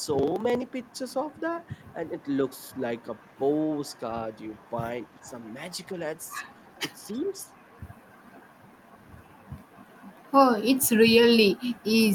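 A loudspeaking far end's echo canceller is likely letting residual echo through, so this speech recording carries an echo leak: faint copies of the talker, delayed by 348 ms and about 40 dB below the speech (about 35 dB at 3.86–3.99 s), at 2.21–3.34, 3.86–3.99, 4.36–4.66, 5.04–5.21 and 5.73–5.86 s. The same canceller, likely confused when both sides talked at once, also causes speech suppressed in double talk, briefly turning the talker down by around 10 dB at 5.22–5.26 s and by around 5 dB at 7.05–7.35 s, so the voice dips.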